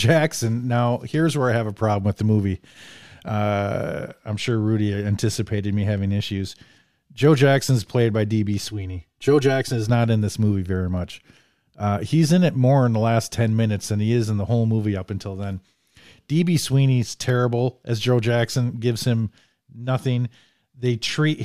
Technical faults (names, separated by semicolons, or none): channel delay (comb filtering)